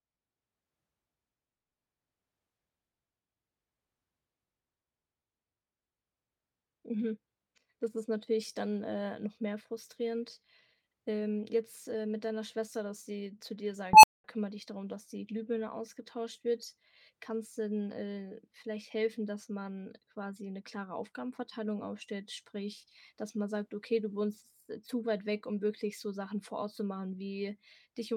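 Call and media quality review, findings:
Unstable filter, 13.93–14.24 s, right after "dass sie zu dir": a tone around 1 kHz swells over about 100 ms into a clipped squeal, then roughly 210 ms of dead air before "kümmere dich darum dass".

Probable component: a recursive EQ or filter stage in the processing chain. Bad coefficients let its output run away until the values overflow and the stage resets, which produces the gap.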